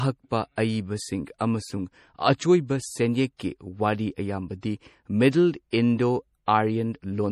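MP3 compression runs through the whole of this speech clip, likely from a low-bitrate encode around 40 kbps. The treble is cut off sharply above 13.7 kHz, and weak frequency lines switching on and off between frames give the plainly audible watery, swirling texture.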